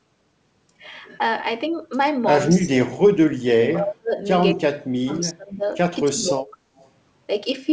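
From 2.49 to 4.14 s, 4.55 to 5.63 s and 6.01 to 6.57 s, the speech dips by up to about 40, 35 and 20 dB. This is speech suppressed in double talk, likely because the echo canceller muted this talker while the far side spoke. At 6.48–6.52 s and 6.77–6.88 s, faint echo leaks through, about 30 and 35 dB down, 226 ms behind the speech, likely from a loudspeaker the canceller missed.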